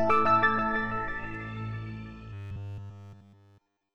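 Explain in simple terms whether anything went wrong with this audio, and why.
From about 2.33 s to the very end, the audio takes on a robotic sound from repeated short buffers. It turns into a stiff, metallic buzz pitched at about 100 Hz, which fits a tiny 10 ms chunk being played over and over. The likely cause is new audio arriving too slowly, so the player keeps repeating that last scrap to fill the gap. Everything in that stretch is repeats, and the real audio underneath is skipped.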